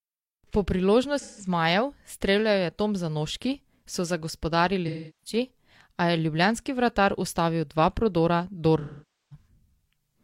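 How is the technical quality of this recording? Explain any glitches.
The recording has three short dropouts from AAC frame loss with concealment. They fall at 1.19 to 1.48 s, 4.87 to 5.36 s and 8.80 to 9.47 s. Each gap is longer than the one before, at about 170, 340 and 510 ms. That fits 4, 8 and 12 lost frames. The decoder had no data there. It rebuilt the sound from the last good spectrum. Each patch sounds smeared, noisy or phasey.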